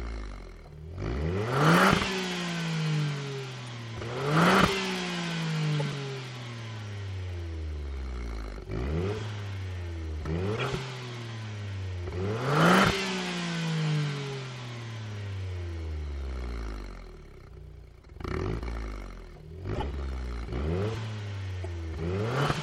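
Brief chirps and noise bursts at 3.65–3.68, 5.75–5.94, 10.53–10.68, 19.74–19.83 and 21.63–21.66 s are corrupt frames decoded: damaged compressed data played anyway, scattering energy across wrong frequencies.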